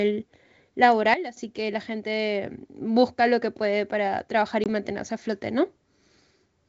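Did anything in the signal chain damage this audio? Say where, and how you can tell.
Yes. At 1.14 to 1.37 s, just before "que la gente busca", the sound and background noise drop together by about 12 dB, likely a sudden gain jump from an unramped gain setting in call processing.

There's packet loss on an ADPCM call at 4.64 s: a hard 20 ms hole, about one packet, between "que puede para trabajar" and "mantenerse a flote". The decoder's predictor then has to resync. The G.722 coding around it sounds clean.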